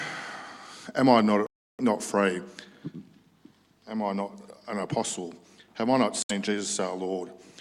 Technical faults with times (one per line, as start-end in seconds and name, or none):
1.46-1.81 Bluetooth dropout
6.22-6.31 Bluetooth dropout